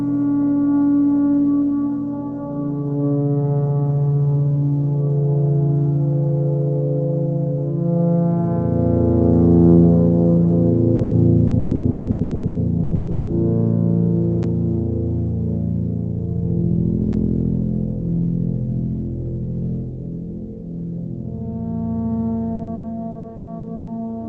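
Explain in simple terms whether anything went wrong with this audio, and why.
Two kinds of fault can be heard.

From 10.95 to 13.30 s, and again from 22.55 to 23.90 s, there is repeated packet loss, which gives a robotic sound. Pieces of the sound went missing over and over. Each hole was patched by stretching the last bit heard. The longest holes are 160 ms and 120 ms. In the first stretch about half the sound is patched, so it turns choppy.

There are also two blocks of digital silence, at 14.43 s and 17.13 s. Each is a 10 ms hole where the sound drops to nothing and comes straight back. Because there is no fade, each one is heard as a brief tick or click.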